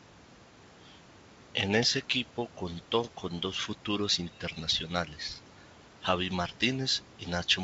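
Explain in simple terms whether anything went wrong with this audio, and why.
Nothing stood out as wrong on listening to this speech; the faint background noise of the room is simply part of the recording, and the call connection it travelled through sounds as it normally would.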